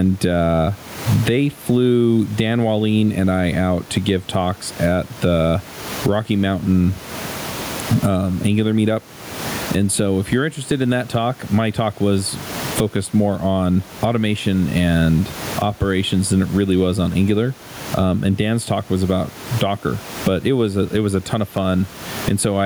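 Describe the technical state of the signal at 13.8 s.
Gain pumping is present at 13.8 s, as across the whole clip: gain is likely set too high, so a fast limiter clamps each loud sound and the gain swings by around 20 dB, with the room noise about 31 dB below the speech.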